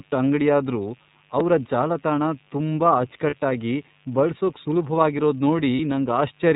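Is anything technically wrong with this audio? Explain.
Yes. A mains buzz runs under the whole speech clip at about 35 dB below the signal. Spiky interference at 50 Hz stacks up harmonics into a steady, raspy buzz.

The iLBC codec is also audible throughout. Narrowband coding in 30 ms frames removes everything above 4 kHz and leaves the speech clear but rough and slightly synthetic, which fits a rate near 13.3 kbps.

Lost iLBC frames occur at 3.30 s, right after "ಅಂಗ್ಡಿಯಾದ್ರೂ ಅವ್ರ ಜಾಲತಾಣ ತುಂಬಾ", and again at 5.76 s. Each gap lasts about 30 ms and is concealed by a held, buzzy repeat of the last pitch cycle before the speech recovers immediately.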